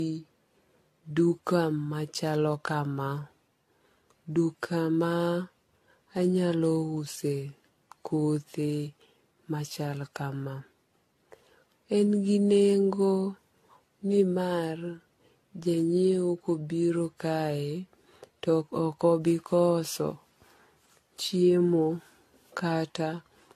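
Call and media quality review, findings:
Generation loss, whole clip: speech likely re-encoded repeatedly, around seven passes through a lossy codec consistent with AAC-LC near 64 kbit/s. Each pass requantises on a shifted frame grid, so errors accumulate. Result: swirly, hollow, smeared speech, blurred attacks, nothing above 14 kHz.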